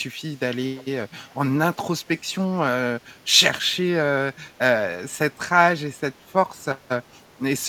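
At 0.76 to 0.84 s and again at 1.3 to 1.34 s, brief echo leak appears: a faint, delayed copy of the speech arriving 343 ms late, roughly 25 dB down, then fainter still. Unlike room reverberation, it is a distinct late repeat, likely from a far-end echo canceller missing loudspeaker pickup.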